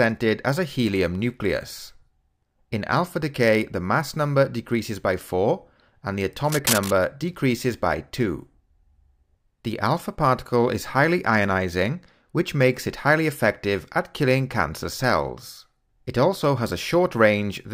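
From 6.45 to 6.91 s, a burst of cable scratch noise rasps over the sound, only a few decibels below it. A worn lead or connector being moved likely caused it. On a spectrogram it shows as a ragged broadband smear, and on the waveform as jagged, irregular spikes.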